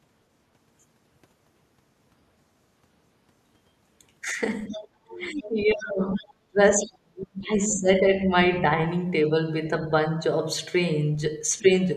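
From 4.65 to 4.81 s a faint second voice, the other side's voice leaking through, sits about 20 dB under the talker. It is likely residual loudspeaker echo the canceller missed. Unlike crosstalk, it arrives in brief scraps, again at 5.45, 6.15 to 6.26 and 7.69 to 7.77 s, one nearer 25 dB down. Overlapping these, the talker dips by roughly 15 dB from 4.68 to 4.87 s, then sinks as much as 30 dB for about three seconds from 5.05 to 8.06 s, with a slight dip around 11.59 to 11.70 s. This is speech suppressed in double talk, likely the canceller attenuating everything while both sides speak.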